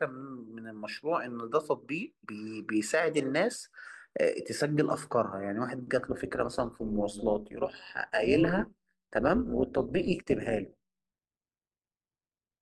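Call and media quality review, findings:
Overlap-add ripple, 5.98 s to end of clip. Frame resynthesis stage: window overlap not summing to constant gain, so level dips and peaks once per frame, about 11 dB deep, near 200 Hz. Speech takes on metallic buzz with extra tones throughout.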